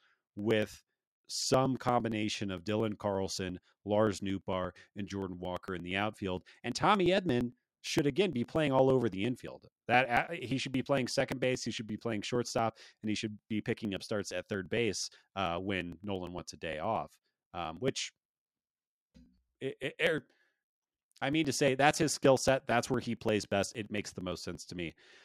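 Periodic USB or driver dropouts run from 0.16 s to 25.13 s, recurring every 0.115 s, close to nine times a second and around 200 times in all. Something appears to stall the audio transfer on a fixed schedule, and each time roughly 10 ms of the speech is skipped outright rather than replaced by silence. The result is a steady stream of small ticks stitched into the voice, heard wherever there is signal.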